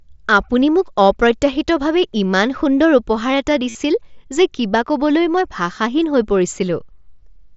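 At 3.69 s the speech breaks into a short buzzy, tonal hold that lasts until about 3.75 s, roughly 52 ms. This is concealed Bluetooth headset packet loss: a run of consecutive voice packets from the headset went missing, which fits several lost frames. The receiver filled the gap by looping the best-matching stretch of the preceding waveform. Unlike a plain dropout, which falls to silence, the level stays up, and a slight warble marks where real audio resumes, against the wideband mSBC character of the speech.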